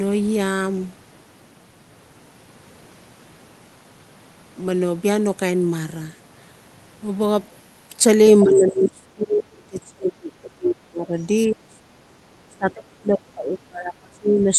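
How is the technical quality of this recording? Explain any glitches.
The recording has two glitches, both in the second half and both tied to echo cancellation.

Other side's voice leaking through, at 8.4 to 8.6 s and again at 11.19 to 11.26 s. A second voice briefly appears, first about 10 dB under the talker, then as a very faint scrap. The likely cause is loudspeaker sound the echo canceller failed to remove fully.

Speech suppressed in double talk, from 8.43 to 11.89 s and from 12.48 s to the end. The talker's level drops sharply, at worst by around 30 dB, for about three seconds in the first stretch. The canceller likely could not separate talker from echo, so it turned everything down.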